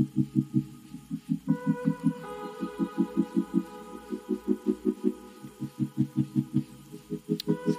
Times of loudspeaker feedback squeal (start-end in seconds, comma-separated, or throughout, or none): none